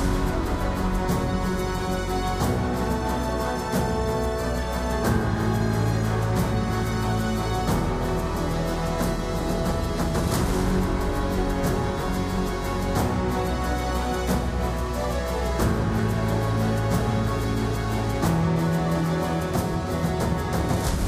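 No technical faults can be heard anywhere in the audio.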